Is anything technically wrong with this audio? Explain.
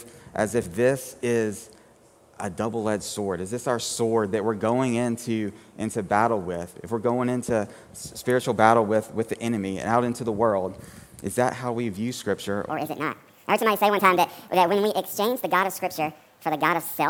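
Yes. From 12.70 s to the end, there is a section at the wrong speed. Playback jumps to 1.53 times the original rate, so pitch and tempo rise together, by roughly seven semitones. The cause is likely a resampling or clock mismatch: the material was read out at a higher rate than it was captured, so everything runs faster and higher at once. The final stretch sounds abruptly hurried and chipmunk-bright against what precedes it.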